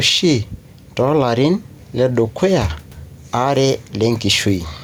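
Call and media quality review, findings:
Gain pumping, throughout. Level swing about 5 dB. Dynamics squashed. Likely cause: input gain set far too high, fast limiter clamping on every peak, then releasing. Room noise, about 45 dB below the speech.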